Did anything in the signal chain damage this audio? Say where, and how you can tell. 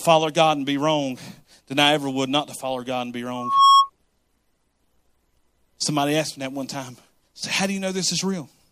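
Yes. In the analogue path, the microphone picked up its own loudspeaker, causing loudspeaker feedback squeal: a 1.1 kHz tone swells from 3.35 to 3.90 s, roughly 10 dB above the speech.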